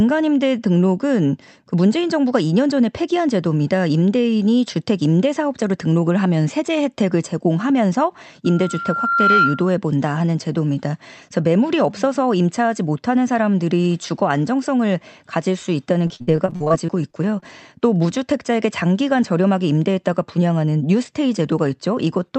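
Loudspeaker feedback squeal, 8.45 to 9.73 s: the microphone picks up its own loudspeaker, and at 1.4 kHz the loop gain passes unity. That tone swells over about a second into a steady squeal, peaking roughly 5 dB above the speech.

Repeated packet loss (robotic sound), 16.07 to 17.44 s: audio drops out again and again, with the longest gap 56 ms. Each hole is patched by stretching the previous sound, so about 25% of the stretch is filler. The speech turns choppy, with fragments missing.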